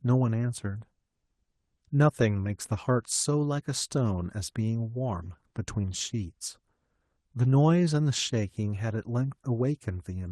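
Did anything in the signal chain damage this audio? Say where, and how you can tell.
No, nothing in the chain damaged this speech; it has come through a WebRTC call path whose Opus coding limits the top end to about 12 kHz, and that band limit and usual coding texture are what an intact call link at a modest bitrate leaves behind.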